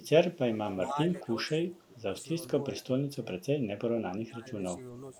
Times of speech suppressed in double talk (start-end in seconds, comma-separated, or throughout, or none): 0.22-2.14, 2.74-2.88, 3.21-3.46, 4.06-4.52